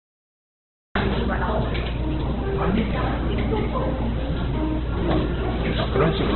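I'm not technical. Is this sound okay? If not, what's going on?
No. The recording has a cut-off start. It is silent until 0.95 s, then jumps in mid-sound with no natural beginning.

Throughout, the sound is dull, rough and grainy, with nothing above about 4.2 kHz. Heavy Opus compression is the likely cause.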